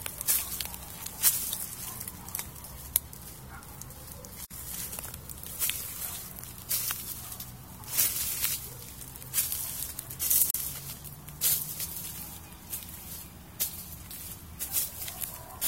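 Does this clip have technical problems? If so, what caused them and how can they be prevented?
Yes. Gaps at joins of encoded pieces appear at 4.45 to 4.51 s (about 56 ms) and 10.51 to 10.54 s (about 37 ms), six seconds apart. Separately encoded segments were joined untrimmed, so encoder start delay and final-frame padding leave short, smeared silences before the sound resumes. Prevent this by trimming encoder delay and padding or encoding the whole programme in one pass.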